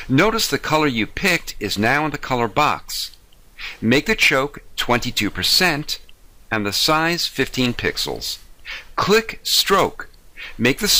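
No audible technical faults.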